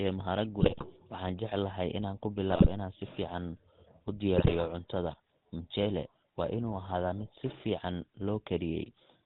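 Throughout, the speech has the buzzy, gravelly roughness of the GSM full-rate codec. Nothing reaches above 4 kHz, and each stretch of the voice is rebuilt from a coarse, regularly pulsed excitation through a vocal-tract model. The texture fits the 13 kbps full-rate coder.

GSM bit errors strike at 0.60–0.84 s, just before "waxaan jecelahay inaan ku", at 2.50–2.68 s, just ahead of "inaan si fiican", and at 4.36–4.52 s. Corrupted filter, pitch and gain values warp the spectrum and level frame by frame, producing squawks, pops and gargling.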